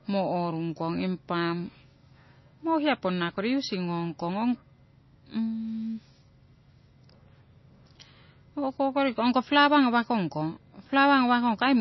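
It's a speech recording with MP3 compression damage running the whole way through: the sound has a watery, swirly edge. That's likely a heavily starved encoder dropping weak frequency lines, which fits a low bitrate around 24 kbps.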